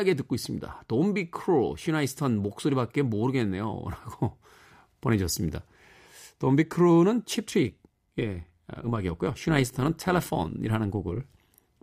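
Overlap-add ripple runs from 7.68 s to 11.63 s. The speech has been split into windowed frames and rejoined with an overlap whose window gains fail to sum to a constant, so the level swells and dips once per frame, by about 6 dB. At a frame rate of around 100 Hz, that pulsing is heard as a metallic buzz with extra tones laid over the voice until near the end.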